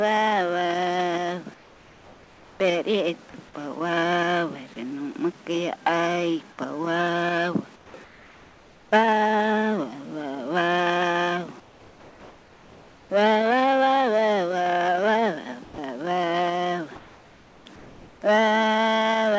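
Discontinuous transmission likely stopped the sender whenever its detector heard only background, so comfort noise in place of the background appears at 1.54–2.60 s, 7.76–7.94 s, 8.04–8.92 s and 11.60–13.10 s. Each time, the real background, about 24 to 27 dB below the loudest passages, becomes steady, featureless hiss about 3 to 5 dB quieter.

At 15.64–15.78 s the voice detector likely mistook quiet material for background. This sound dropped by the voice detector loses about 120 ms, and the same flat noise takes its place until the sound resumes.

Comfort noise then returns at 16.96–17.66 s and 17.76–18.22 s, about 2 dB below the background it replaces. The call codec passes nothing above 8 kHz, which fits a wideband G.722 path.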